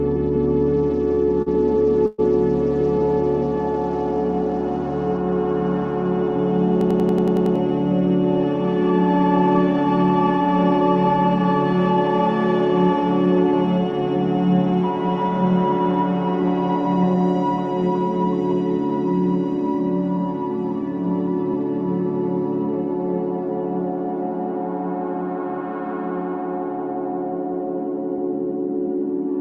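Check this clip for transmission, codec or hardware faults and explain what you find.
Four faults are audible, spread over three stretches of the clip.

Repeated stalls (stutter), 1.15 to 2.20 s: the jitter buffer ran dry three times as packets arrived late, and the receiver stretched the last sound to bridge each wait, the longest about 121 ms. About 176 ms is filled this way, so the audio drags and stutters.

Jitter buffer slow-down, 1.25 to 3.00 s: overlapping the stalls, the receiver rebuilt its reserve by repeating single pitch periods, adding 42 ms. Playback runs at 98% speed with the pitch unchanged, so sounds are slightly drawn out.

System hang loop, 6.81 to 7.56 s: the system froze while the hardware kept replaying its ring buffer. A 93 ms piece repeats eight times at 10.8 Hz, which fits a 4096-sample buffer. It sounds like a machine-gun stutter, and about 0.7 s of audio is lost.

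Jitter buffer speed-up, 17.03 to 21.65 s: the buffer held too much audio, so the receiver cut out short pitch-period pieces, about a tenth of a second in total. Playback runs at 102% speed with the pitch unchanged.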